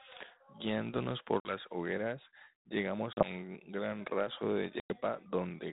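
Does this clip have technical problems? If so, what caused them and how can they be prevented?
Yes. Packet loss on an ADPCM call: at 1.4–1.53 s, 3.13–3.30 s and 4.8–4.93 s, bursts of packets vanished (about 50, 40 and 100 ms of audio), and the G.726 decoder's predictor and step size drifted from the sender's. Each hard-edged silence ends with speech returning briefly distorted. Using a more reliable network link, with packet loss concealment that resets decoder state, would prevent it.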